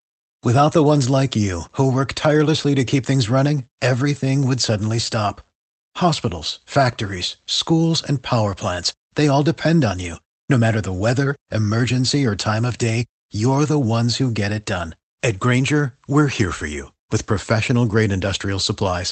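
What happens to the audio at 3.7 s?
Nothing goes wrong at 3.7 s: the speech passes through intact, carried by the call path with its ordinary codec band limit and coding texture and no dropout, glitch or other fault at that moment.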